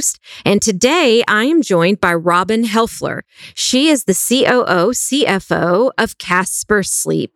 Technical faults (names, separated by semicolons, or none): hard clipping